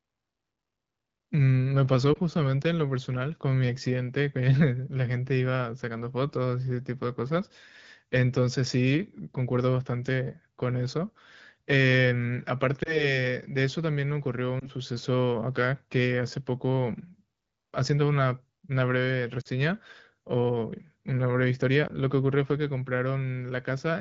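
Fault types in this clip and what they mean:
Lost AMR speech frames: corrupted frames that the decoder patches by repeating the last good pitch and vocal tract settings at falling gain, so speech briefly smears or warbles rather than clicking, as at 2.13, 12.83, 14.6, 19.41 and 21.87 s, and the two-frame loss at 19.41 s fades to near silence.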